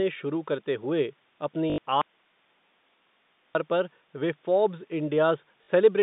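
Telephone-band speech, carried over a G.711 A-law line limited to roughly 150 Hz to 3.7 kHz, shows two kinds of fault. Packet loss with the last packet repeated occurs at 1.70 to 1.78 s, just after "शुरू करते हुए", and again at 5.64 to 5.68 s. The receiver replays the previous packet to cover the gaps, which last 80 ms and 40 ms. Each repeat gives a brief robotic buzz near 50 Hz, which fits 20 ms packets. From 2.02 to 3.55 s, just before "पर वे फ़ोर्ब्स", the audio drops out for about 1.5 s to a faint residue of hiss roughly 40 dB below the speech. It cuts out and returns abruptly, likely because the signal was lost upstream while the path after the break stayed live.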